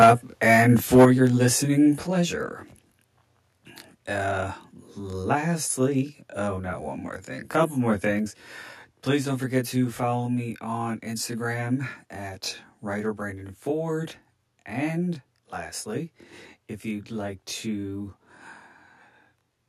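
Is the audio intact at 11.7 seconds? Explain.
No. At 11.7 seconds the speech sounds rough and slightly doubled, and this holds for the whole clip. It is channel delay with comb filtering. One channel runs late by around 20 ms, and when both are summed to mono, sound common to both cancels at evenly spaced frequencies. The result is a dense row of fixed spectral notches starting down near 20 Hz.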